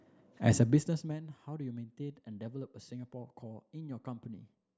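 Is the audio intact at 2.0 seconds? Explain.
Yes, the speech is intact at 2.0 seconds, with no fault at that moment.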